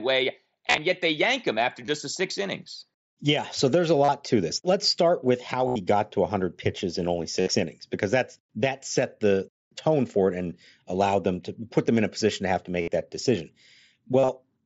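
Speech with concealed Bluetooth headset packet loss at 0.67, 1.86, 4.04, 5.68, 7.41, 12.81 and 14.19 s. Lost packets, up to 75 ms in a run, are filled with a repeated recent stretch, giving a buzzy held tone, not silence or clicks.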